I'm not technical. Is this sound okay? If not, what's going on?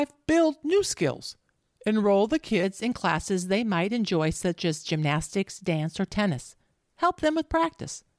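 No. From 0.0 to 2.63 s, just before "in classes they might", there is a wrong sample rate fault. The speech plays about 8% too slowly and sounds about 1.5 semitones lower, which fits audio recorded at 24 kHz being played back at 22 kHz.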